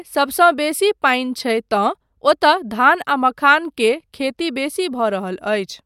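No technical faults can be heard anywhere in this speech recording. There is no moment in the audio that calls for a time stamp or a fault description.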